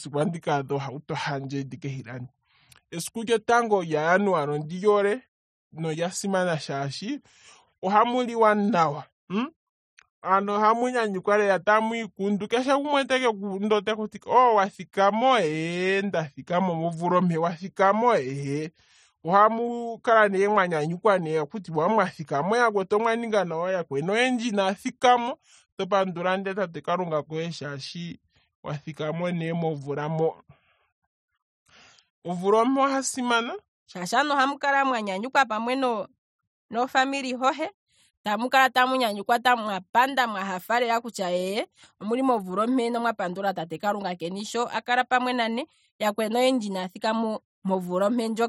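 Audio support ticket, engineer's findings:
Section at the wrong speed, 0.00–33.94 s: speech slowed to 0.81x, pitch about four semitones low, normal from "shaashi aantu ohamu kala". Likely wrong playback clock in editor or player.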